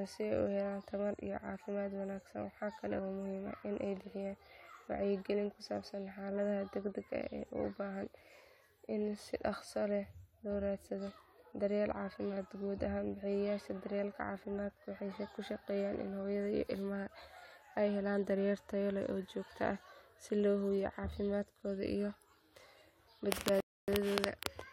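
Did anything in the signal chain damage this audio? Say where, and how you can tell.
Yes, at the playback stage, fed by the network. A rebuffering stall hits near the end of the speech, from 23.60 to 23.88 s. The sound drops to silence for about 0.28 s. Then it picks up at exactly the point where it stopped. Nothing is skipped or repeated. The player simply ran out of downloaded audio and waited for more. The gap is dead silence, and the clip runs 276 ms longer.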